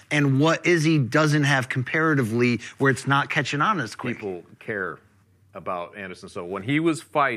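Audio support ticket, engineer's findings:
No technical faults found in the speech signal; levels, continuity and timing hold steady throughout with nothing pointing to a failing component in the chain.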